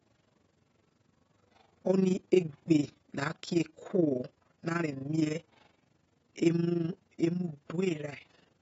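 Across the whole speech clip, the top of the spectrum is missing, and sibilants sound dull, smeared and fizzy. This is likely AAC compression, consistent with AAC-LC at a low bitrate of around 24 kbps. A spectrogram shows a hard ceiling with patchy holes below it.

Throughout, an overlap-add ripple makes the level rise and fall by about 11 dB around twenty times a second, because the reassembled frames do not sum to a steady gain. It sounds like a rough, fast flutter, and the waveform envelope shows a regular comb-like modulation.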